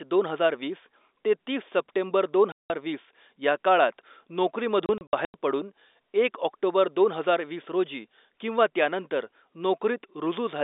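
Right after "ते तीस सप्टेंबर दोन", at 2.52 s, there's packet loss filled with silence: a 180 ms hole, which fits six 30 ms packets gone. From 4.86 to 5.34 s, before "पडून एक ऑक्टोबर दोन", about 210 ms of scattered gaps (longest 90 ms) chop the telephone-band speech.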